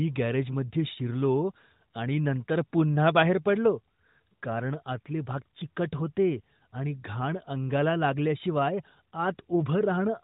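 From 9.50 to 9.66 s the speech turns hoarse and gargly with AMR bit errors: weakly protected bits flipped at roughly 4 percent, misplacing excitation pulses and skewing fine pitch, gain and spectral values, while pitch and level hold. The narrowband AMR path caps bandwidth at 4 kHz.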